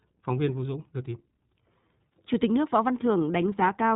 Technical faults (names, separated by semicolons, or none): iLBC codec